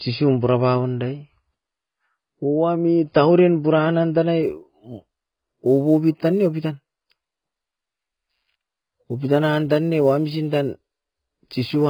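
Throughout the speech, the audio has most likely been through AAC compression. A low-bitrate AAC-LC encoder, at a rate that fits something around 16 kbps, lacked the bits to code the full spectrum, so it cut everything above 5 kHz and quantised the remaining bands coarsely. The result is heavy damage: the speech sounds dull and muffled, with sibilants smeared into a warbling, fizzy haze.

From 4.43 s to the end, sample clock jitter appears. The converter's sampling clock wanders by a few microseconds, so each sample is taken slightly early or late. The error is largest where the waveform changes fastest, which adds a grainy hiss roughly 35 dB below the speech. That roughness gets stronger on loud and bright sounds and disappears in the pauses.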